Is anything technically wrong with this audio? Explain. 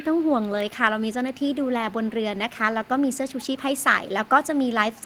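Yes. Throughout the clip, from 0 to about 5.1 s, there is an echo leak: a faint, delayed copy of the speech trails the original by about 373 ms, sitting roughly 25 dB below it. This is likely a far-end loudspeaker feeding its microphone, with the echo canceller letting residue slip back. Unlike room reverberation, which smears into a continuous decay, this is a distinct, separate repeat arriving over a third of a second late.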